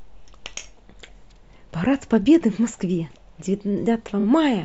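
Speech, with a stutter of repeated frames from 4.19 to 4.24 s. A single 23.2 ms slice of audio plays three times in a row, which fits one compressed frame being written twice extra. This lengthens the audio by 46.4 ms.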